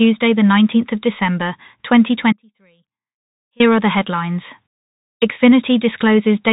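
Speech carried over a Bluetooth CVSD headset codec: the band stops at 3.8 kHz, sibilants sound scratchy and a granular hiss runs underneath throughout. From 2.33 to 3.60 s an audio dropout to a faint residue leaves only sound roughly 35 dB down for about 1.27 s, likely a broken link with the downstream path still live.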